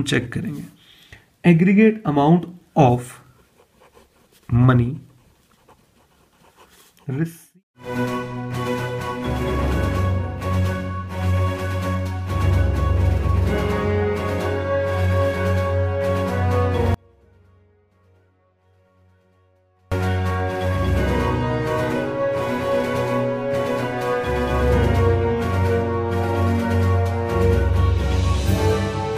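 The signal was likely lost upstream while the path after the break stayed live, giving an audio dropout to a faint residue from 16.94 to 19.92 s. The sound cuts out abruptly for about 3 s, leaving only faint sound roughly 35 dB down before returning mid-flow.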